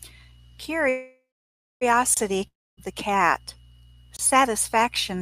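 From 0.89 to 1.83 s the speech stalls in a call audio freeze, likely from delayed packets. The last sound buzzes, fades to silence, then resumes intact.

At 2.14 to 2.17 s, a 25 ms gap between chunks cuts a short hole. It repeats at 4.17 to 4.19 s, matching 2 s chunks.

From 2.47 to 2.79 s a long network dropout hits, likely from lost packets. A fading buzz gives way to silence, and about 0.3 s of speech never returns.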